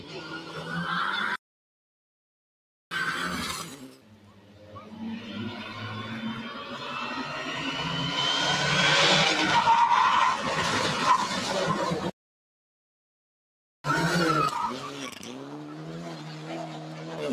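Across the whole clip a noise suppressor meant for speech has been applied to music or sounds. It treats sustained tones and ambience as noise, so held material and tails are pulled down while attacks pass, with level swinging by around 15 dB. On a waveform the envelope breathes unevenly. On a spectrogram steady partials fade in and out while onsets stay solid.

From 0.0 to 0.73 s the sound is cut by the noise suppressor, dropping by about 10 dB at its deepest. This happens again from 3.59 to 4.99 s, for roughly a second and a half, and from 14.69 to 17.28 s, for about three seconds, with drops of about 11 dB each time. Sustained and decaying parts sink or lose their tails early, while sharp transients mostly survive. A spectrogram shows darkened bands and truncated decays behind bright vertical onset lines.

The audio goes silent from 1.36 to 2.91 s, for 1.56 s, and from 12.10 to 13.84 s, for 1.74 s. 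Both gaps are likely playback stalls, where the player starved of data or had its thread blocked until it recovered. The flow stops abruptly mid-sound, then carries on. The waveform flattens to a straight line, and the spectrogram shows a blank vertical slab with hard edges.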